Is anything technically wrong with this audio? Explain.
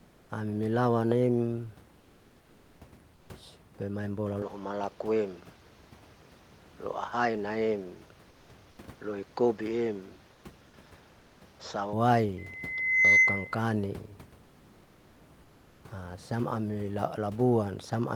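Yes. Three kinds of fault can be heard.

Comfort noise in place of the background appears at 0.00 to 0.29 s, 1.99 to 2.79 s, 10.33 to 10.43 s, 14.43 to 15.21 s and 15.43 to 15.83 s. In each pause, the real room noise gives way to a flat, featureless hiss, about 1 to 2 dB quieter. This likely comes from discontinuous transmission, with the receiver synthesising filler noise.

An input switched to a poorer device runs from 4.42 to 11.93 s. The speech loses everything above 7.6 kHz and turns duller. It also carries a different background hiss, well below the speech. There is no gap and no real level jump at the change. A likely cause is the system moving to another microphone or a headset profile.

A loudspeaker feedback squeal runs from 12.38 to 13.63 s. A single 2 kHz tone swells over roughly 0.7 s and ends up well above the speech. A microphone is picking up its own loudspeaker, and the loop gain at that frequency has passed one.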